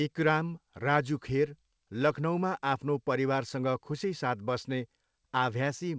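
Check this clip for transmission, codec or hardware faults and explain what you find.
No transmission, codec or hardware faults are present in this speech; it has passed through a working call path whose band limit at 8 kHz, with nothing above it, fits a wideband call codec such as G.722 at 64 kbps.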